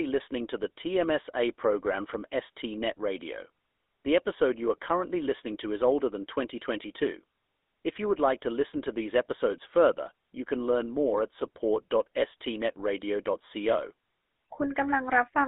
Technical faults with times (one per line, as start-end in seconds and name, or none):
0.00-15.48 GSM full-rate codec
2.92-2.99 GSM bit errors